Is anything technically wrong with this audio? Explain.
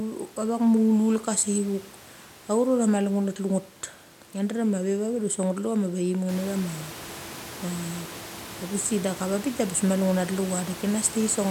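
No, nothing is technically wrong.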